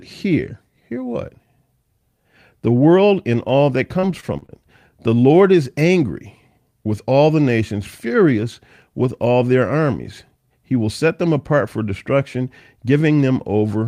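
Just after "world and all that", from 3.99 to 4.52 s, there is repeated packet loss with a robotic sound. Audio keeps dropping out in brief holes, the longest about 42 ms. Each hole is patched by extending the previous sound. The result is choppy, with pieces missing.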